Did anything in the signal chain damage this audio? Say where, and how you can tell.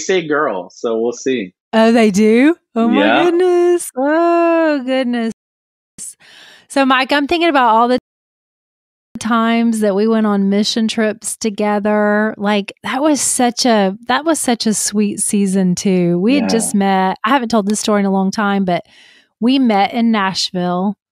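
Yes. At the playback stage, two rebuffering stalls interrupt the speech: silence from 5.32 to 5.99 s (0.67 s) and from 7.98 to 9.16 s (1.17 s). Each time the speech resumes exactly where it stopped, so nothing is lost. The player exhausted its downloaded audio and waited for more, adding time.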